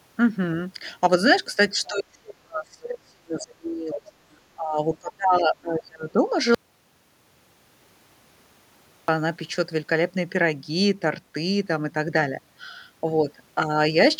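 Right at 1.84 to 1.89 s there's a brief scrap of the other side's voice leaking through, a faint fragment sitting roughly 25 dB under the talker. It's just a flicker. What's likely going on is that the far end was playing out of a loudspeaker at the talker's end, and the echo canceller didn't fully scrub that pickup from the mic before sending it on.

Straight after, from 1.89 to 6.26 s, you get speech suppressed in double talk. The talker's level keeps ducking, at worst by something like 35 dB, and across about four seconds in total the voice sounds pumped, dulled and chopped into pieces. The likely cause is both sides talking over each other, so the echo canceller couldn't tell the local voice from the loudspeaker echo and pulled everything down together.

Then from 6.55 to 9.08 s there's an audio dropout to silence, about 2.54 s where everything simply stops. It's plain silence, with no room tone or hiss at all, and the sound cuts off and then jumps back in mid-flow, so whatever happened in that stretch is gone. 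That pattern likely comes from the input vanishing, through a dropped device, a broken link or an accidental mute, while the recording kept running and writing silence.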